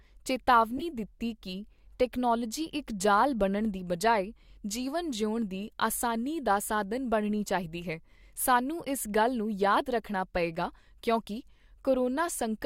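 A short chirp of misplaced noise bursts out from 0.78 to 0.82 s, just before "ਦਿੱਤੀ ਕੀ ਟੈਕਨੋਲਵੋਜੀ", peaking around -25 dBFS. It is a corrupt frame decoded: flipped bits in a couple of compressed frames were played anyway, putting energy at wrong frequencies.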